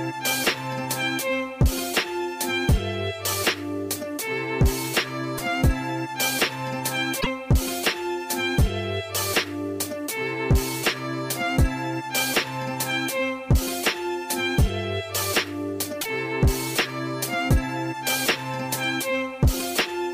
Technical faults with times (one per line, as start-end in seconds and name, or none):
5.37-5.40 broken MP3 bit reservoir
7.20-7.27 broken MP3 bit reservoir
16.00-16.06 broken MP3 bit reservoir